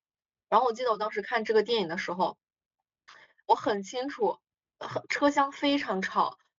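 No audible faults in this speech clip.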